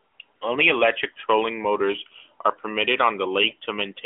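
No technical faults can be heard in the speech, which comes through an AMR narrowband mobile codec at what sounds like its 12.2 kbps top rate, confined to a telephone band of roughly 250 Hz to 3.5 kHz and carrying only light coding colour.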